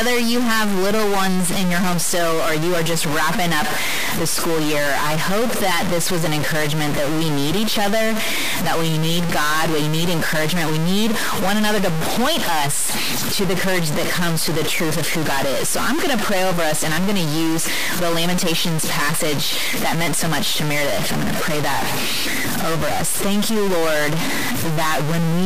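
Throughout the speech, harsh buzzy distortion and noise-filled pauses point to a likely stuck bit, offsetting about half the samples by roughly -15 dBFS.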